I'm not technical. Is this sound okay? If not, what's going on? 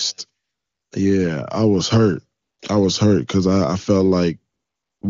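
No. Three times, at 0.43 to 0.91 s, 2.41 to 2.59 s (after "I was hurt") and 4.53 to 5.01 s (after "because I I felt"), the phone stopped sending speech and played AMR comfort noise, a smooth artificial hiss. Unlike a dropout, the gap isn't silent.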